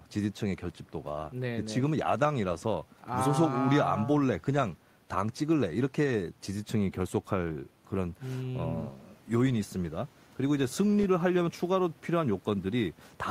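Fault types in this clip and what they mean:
No technical faults can be heard anywhere in this speech recording. There is nothing here to list.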